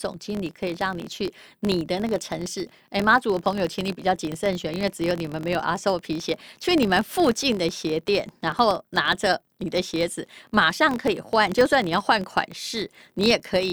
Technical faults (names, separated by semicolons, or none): filter restarted on every block